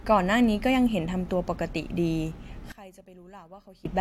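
From 2.72 to 3.85 s the speech drops by about 23 dB to a faint trace, likely one channel inverted, cancelling the centred voice when summed to mono.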